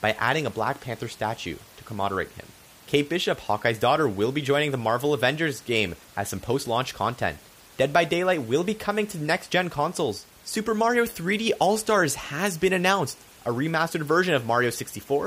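There are no technical faults to describe in this speech clip.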